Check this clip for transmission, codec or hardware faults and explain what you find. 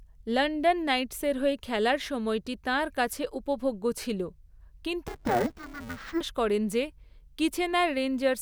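One fault turns up. From 5.08 to 6.21 s, just before "করেন যে", the speech turns dull and robotic with a 345 Hz buzz. This is interleaved audio read as planar: each 2.9 ms block's alternating samples were split into halves, which fits a 128-sample block.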